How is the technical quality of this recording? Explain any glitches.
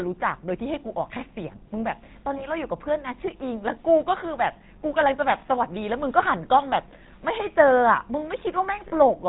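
The technical quality is poor. The speech has passed through a low-bitrate phone codec, and two brief dropouts break the sound.

The whole clip carries GSM full-rate codec damage, and it is plainly audible. The codec models the vocal tract and drives it with a thinned pulse train. Nothing survives above 4 kHz. The voice sounds buzzy and gravelly. The rate suggests roughly 13 kbps coding.

Lost GSM frames occur twice, from 2.38 to 2.46 s and from 8.88 to 8.95 s. About 20 ms is missing at the first and about 40 ms at the second, consistent with one and then two frames. The decoder repeats the last good frame, so each gap becomes a short, rough, metallic ring.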